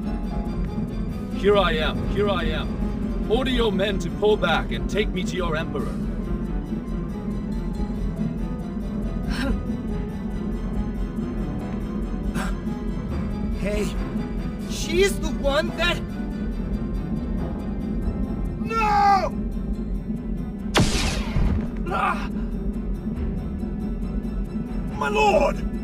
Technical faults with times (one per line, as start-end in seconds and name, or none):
1.48-3.62 doubled audio track